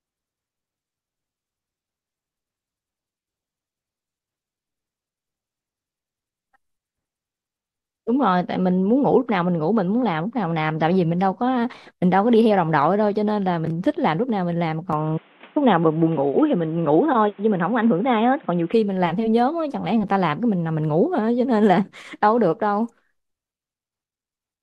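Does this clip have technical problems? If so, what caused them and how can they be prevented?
Yes. From 14.93 to 18.74 s the speech turns dull, with nothing above 3.8 kHz and new quiet background noise, likely from the input switching to a poorer device. Tone and noise floor change together, which a plain bandwidth filter wouldn't cause. Locking the recording to one fixed microphone and turning off automatic device switching prevents it.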